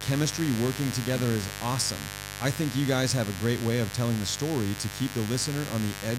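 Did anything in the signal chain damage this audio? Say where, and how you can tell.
Yes. A mains buzz runs through the whole speech clip, from start to finish, which places the damage in the analogue wiring ahead of the converter. It is a steady, raspy buzz at a fairly high level, roughly 10 dB below the speech. Its fundamental is 50 Hz, with harmonics stacked well up into the kilohertz range. That spectrum points to sharp switching spikes from a dimmer, rectifier or poorly shielded cable coupling into the signal twice per mains cycle.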